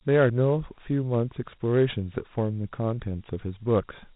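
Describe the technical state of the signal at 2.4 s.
At 2.4 s the speech carries Dialogic VOX ADPCM damage, as it does for the whole clip. Each sample is coded as a 4-bit step relative to a predicted value, with the step size adapting to the signal. That coarse adaptation leaves a plainly audible gritty hiss riding on the speech. Nothing is present above 3.9 kHz, which fits an 8,000-sample-per-second stream at 32 kbps, giving the dull, telephone-band character.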